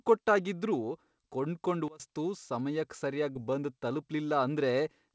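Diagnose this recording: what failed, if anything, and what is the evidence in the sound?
Sudden gain jump from 1.88 to 2.00 s: speech and background noise drop together by about 24 dB, likely a gain setting applied without a ramp.

Short concealed packet loss at 3.33 to 3.36 s in the G.722 call's jitter buffer: 20 ms was missing and filled by extending the preceding sound, heard as a brief smear.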